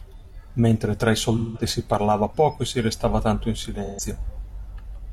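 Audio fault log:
1.37–1.61 s and 3.85–4.00 s, AAC frame loss with concealment: about 171 ms and 128 ms of coded audio went missing, consistent with four and three lost frames. The decoder rebuilt each gap from the last good spectrum with randomised detail, leaving a brief smeared, noisy patch in the speech.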